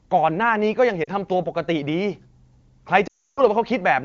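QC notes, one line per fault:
1.03 to 1.10 s and 3.08 to 3.41 s, lost AMR speech frames: the decoder filled the gaps by repeating the last good pitch and vocal tract settings with falling gain. The short 40 ms gap gives a brief dip. The 300 ms run drops the speech to near silence within two frames before it returns weak.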